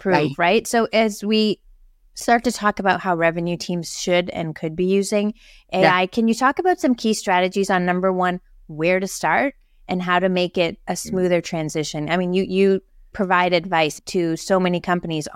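A block of digital silence at 2.20 s, just before "to talk about how", drops the speech out for about 5.8 ms. A stretch of output was likely never filled in time and went out as zeros, a length that fits a 256-sample buffer. With no fade, the signal cuts away and returns abruptly, so the two edges merge into a single sharp tick rather than an audible hole.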